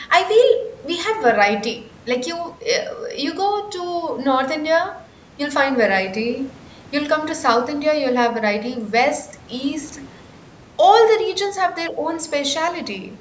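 No technical faults can be heard in the speech, which has gone through a call's microphone processing that trims the deepest bass and leaves nothing above 8 kHz, both normal for that path.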